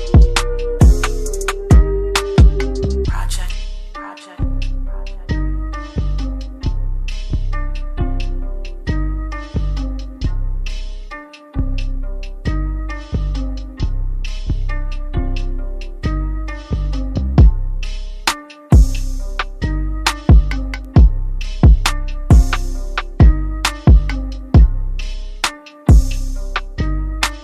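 A single sharp tick cuts through the sound at 3.49 s, reaching about -10 dBFS, and a second, quieter one follows at 20.85 s at about -22 dBFS. Each is a bit error spike lasting just one sample: a flipped bit in memory or on a digital link made the sample jump by a power of two and snap straight back. That instantaneous jump scatters energy across the whole spectrum, so the tick has no relation to the surrounding audio.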